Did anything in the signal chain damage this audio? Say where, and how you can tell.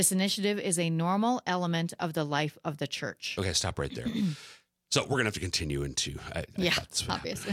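Yes. At 6.72 s the speech has chunks out of order, a driver or buffer fault: one 5.8 ms chunk plays one chunk late, swapped with its neighbour. Unlike a dropout, nothing is missing or silent. There is a brief jumbled flicker across the three hard joins.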